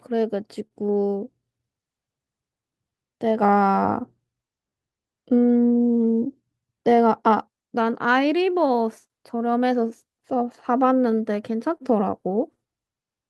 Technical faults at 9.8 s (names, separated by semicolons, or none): clock drift between sender and receiver; repeated timing corrections; scattered short gaps